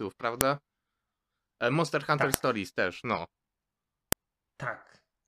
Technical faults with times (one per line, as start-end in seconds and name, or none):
0.41 file header played as audio
2.34 file header played as audio
4.12 file header played as audio